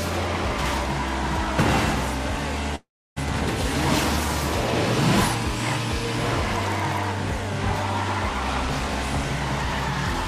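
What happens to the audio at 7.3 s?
Nothing goes wrong at 7.3 s; the audio carries on intact through that moment.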